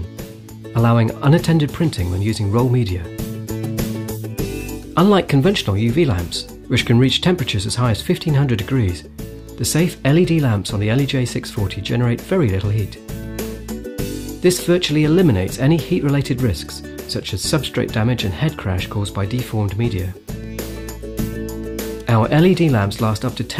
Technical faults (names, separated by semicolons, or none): none